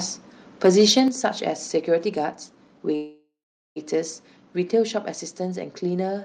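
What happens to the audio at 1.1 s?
Right at 1.08 s the whole signal drops by about 6 dB in one step, a microphone volume stepped down event, likely the call software cutting the device's input volume after it heard clipping. On the waveform the envelope shrinks abruptly, and on a spectrogram every band dims together at once. That clipping is just before, from 0.64 to 1.0 s: microphone overload, likely with peaks pushed about 4 dB past the converter's limit. A small fraction of the waveform's tops are flattened, giving a harsh crackle, seen as broadband smears on the spectrogram.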